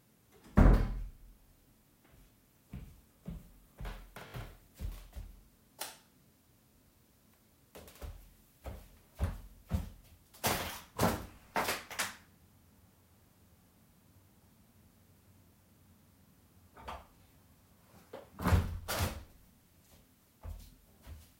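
At 4.28 s a repeated buffer is heard. New audio failed to arrive in time, so the same short slice played again. It repeats three extra times, to 4.34 s. Each join is hard, giving a brief buzzy stutter. The slice length fits a 20 ms buffer. Roughly 70 ms of the sound is lost. At 11.36 s the same fault returns, with one extra play ending at 11.38 s. It is heard as a single click, and about 20 ms goes missing.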